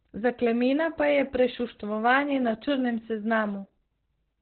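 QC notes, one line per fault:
throughout, Opus voice compression: muffled, hoarse, robotic speech with nothing above 4.2 kHz, from coarse narrowband SILK coding, which fits about 8 kbps.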